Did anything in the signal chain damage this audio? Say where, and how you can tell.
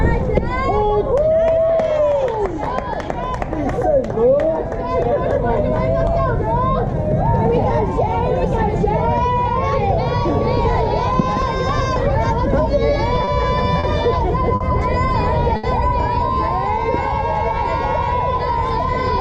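Yes: short stalls from late packets at the network stage, at 13.24, 13.79, 14.55 and 15.56 s. Each holds sound 30 to 70 ms while the jitter buffer waits, then resumes.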